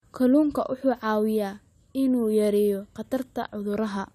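No audible technical faults here.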